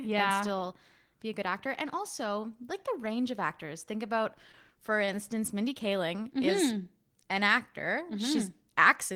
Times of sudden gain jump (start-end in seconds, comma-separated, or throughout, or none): none